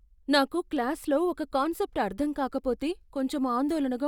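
Nothing stood out on listening to the speech in this recording.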